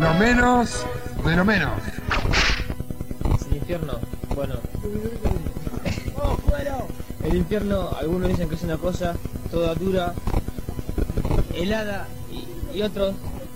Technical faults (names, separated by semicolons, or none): mains buzz